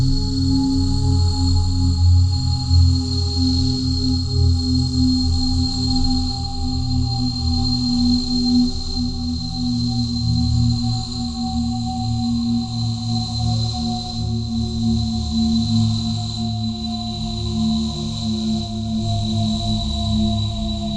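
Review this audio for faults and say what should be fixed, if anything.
Nothing needs fixing, because the signal holds steady, with no technical faults anywhere in the recording.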